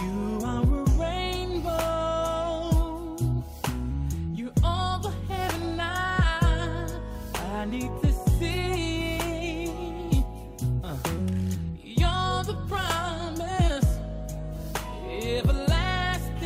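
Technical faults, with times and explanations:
No technical faults are audible anywhere in the clip.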